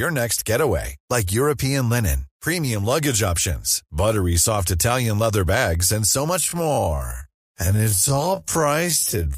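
From 6.38 s to the end, the speech becomes a time-stretched section. It plays at about half speed, 0.511 times, yet the pitch holds steady. Software likely stretched it by repeating short pieces. The result drags.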